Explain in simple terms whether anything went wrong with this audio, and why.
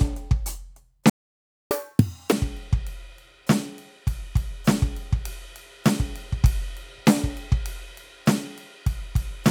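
Yes, two things went wrong. At 1.10 s the music cuts out into silence for about 0.61 s, until 1.71 s. That is a playback stall: the player most likely ran short of audio data or was held up, so nothing reached the speakers until it recovered.

From 1.71 to 2.32 s the music rushes along at double speed and sounds much higher, nearly an octave up, before settling back to normal. This is catch-up at higher speed: the player races through the audio it fell behind on to make up the lost time.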